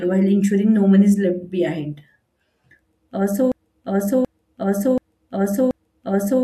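At 3.52 s the speech locks into a broken-record loop: a fragment of about 0.73 s plays back to back, identically, four times, and the repetition continues to the end of the clip. The likely cause is a stall in the player, encoder or stream, which kept resending the last fragment it held instead of new audio. Whatever speech belonged in that final stretch is missing, replaced by the same short piece cycling at a steady rate.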